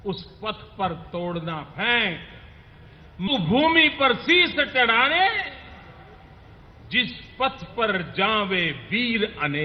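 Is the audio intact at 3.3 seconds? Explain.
No. At 3.27 to 3.29 s there is a skip ahead: a stretch of roughly 0.7 s was discarded while later audio already sat waiting in the buffer, so playback leaps forward with no filled gap, and the sound on either side is butted almost directly together.

A jitter buffer speed-up follows from 3.39 to 5.64 s. The buffer still held more audio than it targets, so the receiver repeatedly trimmed pitch-period-sized pieces, about 150 ms in total. The sound runs about 6% fast at unchanged pitch, giving a slightly hurried feel.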